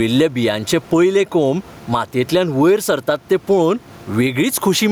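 Speech with gain pumping running all the way through: the room noise sits about 33 dB below the voice, and the gain swings by around 10 dB, so everything sounds squashed. Likely cause is gain set way too hot with a fast limiter clamping on each loud syllable.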